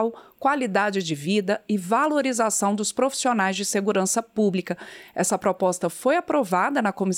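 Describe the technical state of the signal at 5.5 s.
At 5.5 s the signal is intact, with no audible dropout, distortion, glitch or other technical fault at that point.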